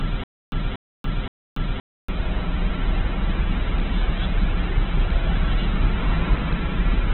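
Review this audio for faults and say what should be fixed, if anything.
From the start of the clip to 2.08 s there is a stutter with silent gaps. It is already under way when the clip begins. A 236 ms burst repeats three times, every 521 ms, with about 285 ms of digital silence between repeats. A stalled player or stream is the likely cause: at each retry it replays its last fragment and then runs dry. The audio meant for that stretch is lost. A deeper playback buffer would prevent this.

Throughout the clip the sound is rough, grainy and muffled, and nothing is present above 4.2 kHz. This is likely Opus compression at a very low rate, around 8 kbps. The encoder keeps a narrowband range and fills the starved bands with folded or noisy content. Encoding at a higher bitrate would prevent this.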